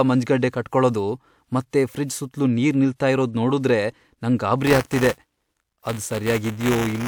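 From 4.66 s, right after "ನಿಲ್ತಾ ಇರೋದ್ ನೋಡುದ್ರೆ ನಂಗ್", a robotic 200 Hz rattle rides on the speech to the end. This is buffer tearing: the writer and reader slipped, so each roughly 5 ms period holds a small slice of audio about 10 ms old.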